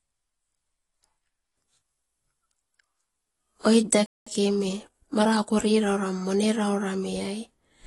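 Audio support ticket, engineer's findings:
AAC compression, whole clip: speech sounds dull and smeared, with a fizzy, warbly edge on sibilants and the top end rolled off. Likely an AAC-LC encode starved of bits, fitting something around 32 kbps. Encoder drops the top band and quantises coarsely, so detail goes and the holes left behind swirl.

Playback stall, 4.06 to 4.27 s: audio just cuts out mid-flow for about 0.2 s, then resumes. Likely the player's buffer running dry or its output thread getting blocked. Nothing to play, so the device outputs silence until data shows up again.

Time-compressed catch-up, 4.27 to 5.63 s: right after the dropout the speech comes out hurried, about 1.15x, pitch unchanged. Player is clawing back the backlog from the stall by snipping out short slices and cross-fading the joins.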